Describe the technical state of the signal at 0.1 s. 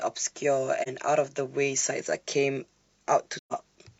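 At 0.1 s the speech signal is intact, with no dropout, clipping, glitch or other audible fault at that moment.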